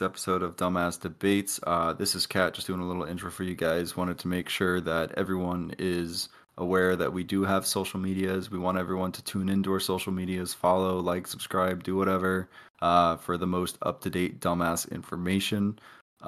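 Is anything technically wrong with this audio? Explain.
No, nothing technically wrong turns up anywhere in this speech recording.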